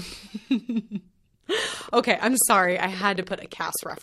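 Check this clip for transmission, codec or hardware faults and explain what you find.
There's one fault, a train of clicks running from 1.59 s to 3.98 s. Regular pulses arrive about 13.4 times a second, around thirty in total, peaking a bit above the speech. It sounds like steady ticking over the talking, likely from nearby equipment interference or a faulty connection or power supply.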